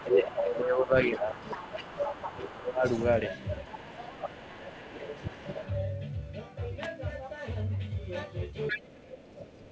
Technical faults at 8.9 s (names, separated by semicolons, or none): speech suppressed in double talk